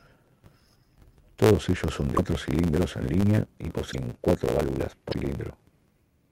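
A block size mismatch (truncated) runs from start to finish. One stage delivers longer blocks than the next one takes, so the tail of each block is discarded. That produces a buzz at 109 Hz and speech running 1.09 times fast at near-normal pitch.

A broken MP3 bit reservoir is the likely cause of three short glitches. The first, at 2.16 to 2.18 s, falls after "ellos son" and before "cilindros en línea y". The second, at 3.91 to 3.95 s, follows "cilindros en línea y", and the third falls at 5.11 to 5.14 s. At each, the audio skips ahead with a brief chirp, noise burst or gap. With frames cut out, the next frame reaches back for borrowed data and reads another frame's bytes instead. The MP3 frames here are about 26 ms long.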